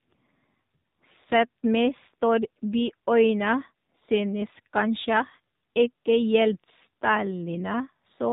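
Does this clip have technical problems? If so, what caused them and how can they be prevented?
Yes. AMR narrowband mobile codec damage runs through the whole clip. Nothing above 4 kHz survives. The speech is rebuilt from a vocal-tract model driven by sparse pulses. Its plainly buzzy, synthetic edge fits a low rate near 7.4 kbps. Prevent it by recording or sending over a wideband path instead.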